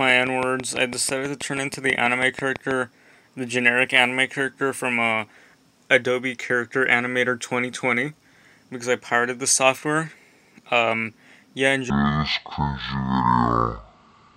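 A train of clicks runs from 0.10 to 2.72 s: around fifteen near-identical pulses at a steady 6.1 per second, each standing roughly 10 dB above the surrounding audio. Because they repeat so regularly and keep the same shape, they sound like an even ticking laid over the material, audible in quiet gaps as well. The likely cause is interference from nearby equipment or a faulty connection or power supply injecting a pulse at a fixed rate.

A section at the wrong speed runs from 11.90 s to the end at 14.36 s. It plays at 0.52 times its proper rate, so speed and pitch drop together at the boundary, leaving the sound about ten semitones lower and roughly half as fast, heavy and dragging. The likely cause is that this part was played back or edited against the wrong clock.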